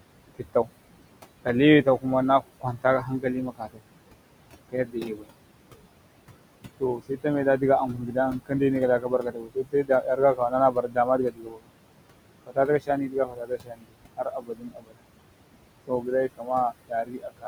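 Throughout the speech, a noise suppressor attenuates the background, which sits about 14 dB below the voice, by about 21 dB frame by frame, leaving a residue that dips between words and rises under them. Speech is cut by the noise suppressor at 1.44–3.83 s, 4.69–5.29 s, 6.8–11.72 s, 12.46–15.03 s and 15.87–17.46 s. It mistakes quiet parts of the speech for noise and pulls them down by about 20 to 22 dB, so soft sounds and word endings come across as swallowed.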